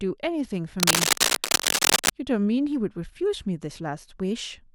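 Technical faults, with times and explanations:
0.80–2.10 s: cable scratch noise. Dense, uneven rustling bursts sit about 5 dB above the speech, likely from a worn cable or connector moving and rapidly changing its contact resistance.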